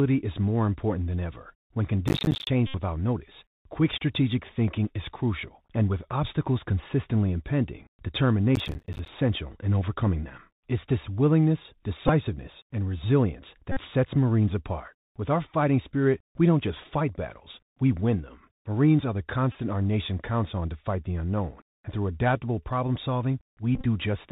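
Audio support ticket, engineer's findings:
Bluetooth CVSD headset codec, whole clip: muffled, narrowband speech with nothing above 4 kHz, scratchy s sounds, granular hiss under the voice, harsh distortion on loud high-frequency peaks. Consistent with one-bit CVSD at 64 kHz, whose adaptive step cannot keep pace with fast, loud high content (slope overload). Damage plainly audible.

Processor overload crackle, 2.08–2.47 s and 8.56–9.08 s: dense gritty tearing riding on the speech, then the crackle stops. Audio thread missing deadlines back to back. Fits roughly 10 ms buffers, around twenty dropped in each burst, every miss leaving a hard-edged gap of silence.

Bluetooth headset packet repeated, 2.67–2.75 s, 12.08–12.10 s, 13.72–13.80 s, 19.52–19.55 s, 23.75–23.86 s: short buzzy patches near 267 Hz in place of speech. Lost voice packets concealed by re-decoding the previous packet every 3.75 ms. 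Lost spans about 71, 11, 49 and 23 ms. Last event scattered over about 98 ms, longest unbroken run about 30 ms.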